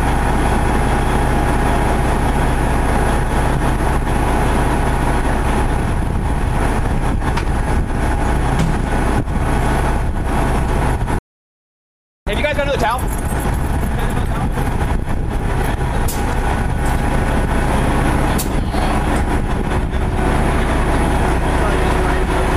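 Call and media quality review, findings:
Playback stall, 11.19 to 12.27 s: output drops to silence for about 1.08 s mid-flow, then resumes. Likely cause is the player's buffer running dry or its audio thread being blocked.

Time-compressed catch-up, 12.27 to 14.41 s: audio hurried at 1.5x with pitch held, small segments cut and crossfaded as the player drains its post-stall backlog.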